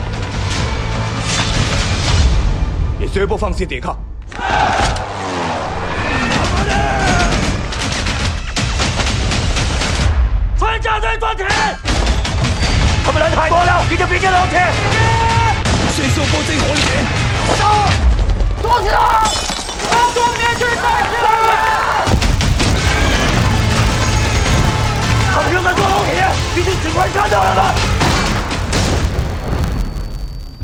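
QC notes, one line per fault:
18.59–30.64 s, filter restarted on every block: from about 18.6 s to the end there's a steady 100 Hz buzz riding on the sound, getting louder and softer with it. What's going on is that a filter is dropping its internal state at each block boundary and starting again from silence, so every block opens with a tiny transient. Those clicks arrive 100 times a second, which fits blocks of about 10 ms, and they blur together into the buzz.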